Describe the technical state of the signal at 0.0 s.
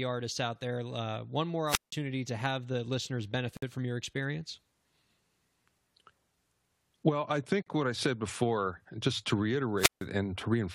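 At 0.0 s the speech signal is intact, with no technical fault present at that moment.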